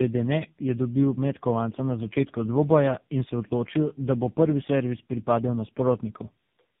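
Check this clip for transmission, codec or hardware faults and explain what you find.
The clip has one fault, present throughout: tandem speech coding. Three speech coders in succession each re-encoded the previous one's output, leaving speech rough, muffled and warbly, with nothing above 3.6 kHz. That is rougher than any single narrowband codec.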